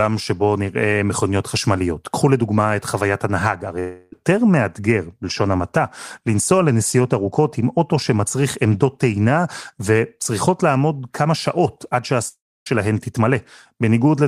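At 3.79 to 4.13 s the speech turns into a fading buzz for about a third of a second. At 12.28 to 12.67 s a similar buzz dies into silence for its last 0.28 s. Both gaps are likely a long network dropout, with the receiver concealing lost audio.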